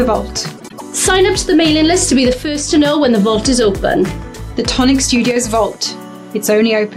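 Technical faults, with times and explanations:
0.57–0.82 s, frames out of order. Two neighbouring blocks of about 104.5 ms each play in swapped order, which fits runs of four frames. The stretch sounds like a garbled flutter. Nothing is lost in time.
2.33–2.71 s and 5.31–5.36 s, one channel drops out. The level falls abruptly by about 6 dB, then recovers. The second dip lasts only 50 ms. The likely cause is one stereo channel going missing, so the mono sum loses half its shared content.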